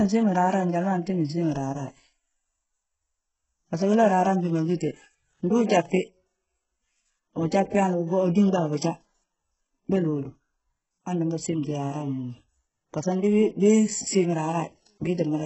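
From start to finish the speech carries heavy codec damage, most likely from HE-AAC compression at a very low bitrate, around 8 kbps. Treble is synthesised from copied lower bands and stops near 7.9 kHz, so s sounds come out gritty, metallic and lispy.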